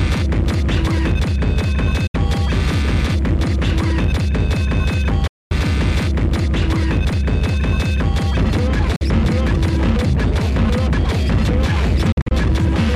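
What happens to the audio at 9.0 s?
The audio drops to silence from 8.96 to 9.01 s, a hole of 46 ms, likely a Bluetooth dropout where roughly two packets missed the headphones. Unlike a stall, playback resumes further along, as if it had continued underneath.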